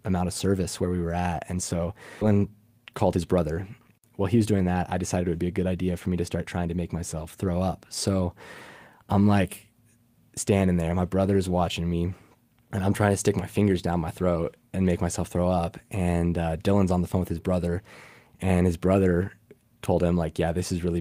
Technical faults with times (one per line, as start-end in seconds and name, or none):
2.21-2.23 skip ahead
2.31-3.38 jitter buffer speed-up
4.20-5.39 jitter buffer speed-up